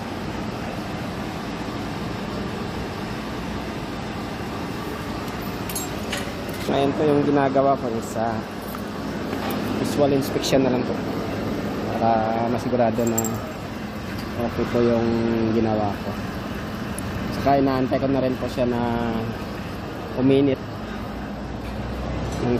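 At 8.75 s a sharp snap cuts across the sound. A second one lands at 16.99 s. Each lasts only a few milliseconds and sits on top of the audio rather than replacing it. These are electrical switching spikes. The likely source is a nearby switch, motor or static discharge. Its brief arc would induce a jolt of voltage in the audio line. That jolt is heard as a hard, dry click.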